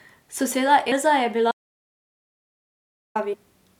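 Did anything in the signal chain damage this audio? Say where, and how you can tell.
Yes. At the codec stage, whole compressed frames went missing or were rejected by the decoder as damaged, so they were never played. At 0.91 s and again from 3.32 to 3.34 s, the speech jumps ahead by a handful of frames, roughly 100 ms each time. That fits a frame length of 23.2 ms.

Further up the chain, at capture, the input was likely lost while the recorder kept writing silence. This produces an audio dropout to silence from 1.51 to 3.15 s, about 1.64 s long. The speech cuts off mid-flow into total silence with no room tone, and whatever was said in that span is gone.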